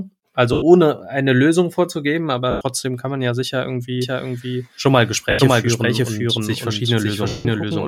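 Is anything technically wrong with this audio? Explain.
Yes, there are a few problems.

Lost LE Audio frames at 0.53–0.62 s, 2.51–2.61 s, 5.30–5.39 s and 7.28–7.45 s: the decoder patches each gap by recycling the last spectrum with scrambled phase, so the speech smears into noisy mush that fades out on the longest gap.

A doubled audio track runs from 4.02 s to the end: a second copy of the speech, roughly as loud and about half a second late, likely from a second capture path or an edit that stacked two copies, giving a dry, flat echo.

The light lossy compression on the audio is normal and isn't a fault.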